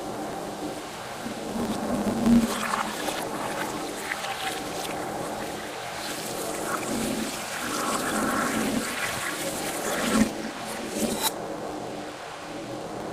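Throughout the clip, a filter restarted on every block, losing its state at each boundary and beginning each block from silence. Every restart leaves a small transient, heard as a buzz at about 93.8 Hz, which fits a 512-sample buffer, rising and falling with the sound's level.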